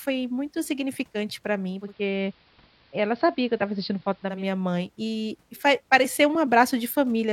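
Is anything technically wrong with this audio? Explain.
Yes. From 1.69 s, after "muito significante pra", until 4.46 s, before "mãe e e faz", the speech shows digital radio blending to analogue: the receiver loses the digital stream and cross-fades over about 258 ms to the AM broadcast, which adds AM-narrowed treble and hiss roughly 35 dB down, at unchanged level, then blends back.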